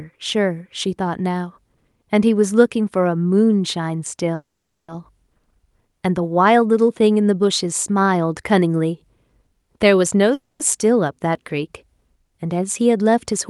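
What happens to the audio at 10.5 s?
Packets were likely held up in transit, so the jitter buffer ran dry and produced a call audio freeze from 10.34 to 10.61 s. The receiver stretched the last bit of sound into a brief fading buzz or hiss, and about 200 ms of that stretch is silence. When the packets arrived, the speech picked up exactly where it had stopped. Nothing was lost, but a 260 ms gap was inserted, and everything after it plays that much later.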